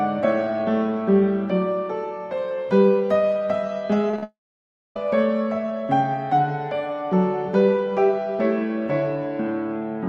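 At 4.10–4.14, 4.16–4.19 and 4.19–4.23 s, short concealed packet loss fills gaps of 20–30 ms with continued sound. It is heard as brief smears, and appears as blurred, stretched harmonics.

From 4.23 to 4.96 s, a long network dropout is the likely cause. A fading buzz or hiss gives way to about 0.61 s of flat-line silence, seen as an empty band on the spectrogram.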